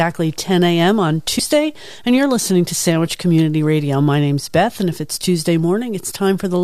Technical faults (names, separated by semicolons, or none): compressed frames skipped